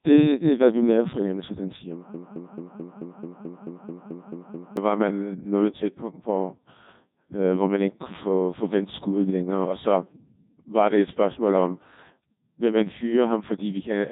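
From the start, the whole recording carries the sound of the Codec 2 vocoder, heavily applied. The speech comes out robotic and buzzy because the decoder does not keep the waveform. It rebuilds the voice from sine waves driven only by pitch, voicing, energy and a rough spectral envelope, and the degree of damage fits a very low bitrate of around 1.2 kbit/s. On a spectrogram, energy stops sharply at 3.8 kHz, and the harmonics look unnaturally regular and smeared. The waveform has lost its fine detail.

At 2.14 s, right after "fornemmelse den siger mig", a broken-record loop begins. A 218 ms fragment repeats exactly, back to back, twelve times, until 4.77 s, and the playback resumes with "var man nået til". It sounds like a stuttering, machine-gun repetition. The likely cause is a stalled player or stream resending its last buffer, and the audio due in that span is lost. On a waveform and spectrogram, identical blocks tile evenly across the gap.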